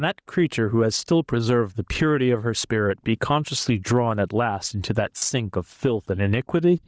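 Gain pumping runs through the whole speech clip, most likely from an input gain set far too high with a fast limiter clamping down on every loud syllable. The level swings by something like 15 dB. Loud and soft passages are pressed close together, giving a squashed, breathing quality.

Bluetooth LC3 compression is also audible from start to finish. The likely cause is the LE Audio codec running at a low rate, consistent with about 32 kbps in 10 ms frames. Much of the upper spectrum gets discarded and refilled with shaped noise, so the speech carries a breathy, grainy edge. The call's microphone processing limits the band to 8 kHz.

Lost LE Audio frames occur from 5.18 to 5.22 s, a 40 ms dropout consistent with four missing 10 ms frames. The decoder covers the gap by repeating the last received spectrum with scrambled phases. Instead of clean speech, that short stretch becomes a brief noisy smear, a hiss-like blur standing in for the sound before the signal picks up again.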